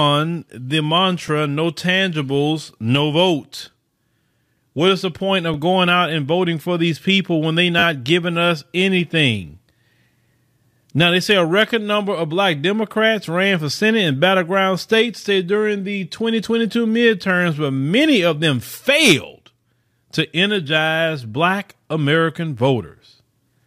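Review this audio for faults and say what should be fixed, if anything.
The speech has three repeated buffer faults: brief clicks at 1.28 s and 5.54 s, and a short buzzy stutter from 7.79 to 7.83 s. When fresh audio arrived late, the device replayed its last block. The tiny repeats fit a 10 ms buffer, and nothing seems lost. Give the playback path a larger buffer or more scheduling headroom so it never runs dry.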